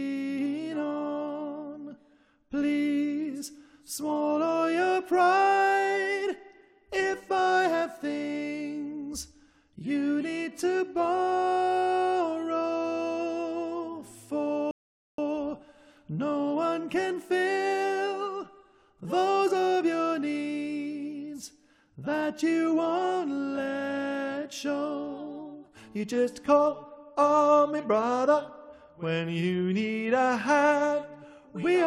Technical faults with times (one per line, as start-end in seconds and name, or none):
14.71-15.18 rebuffering stall